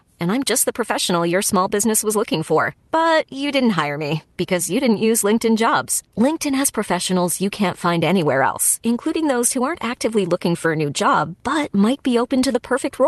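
The speech comes through a WebRTC call path with the Opus codec working as expected, its upper bandwidth reaching about 12 kHz, and the signal shows no technical faults.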